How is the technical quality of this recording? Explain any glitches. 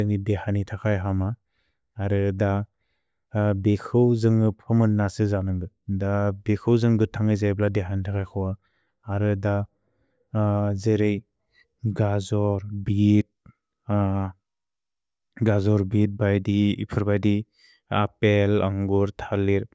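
No glitches or technical faults can be heard anywhere.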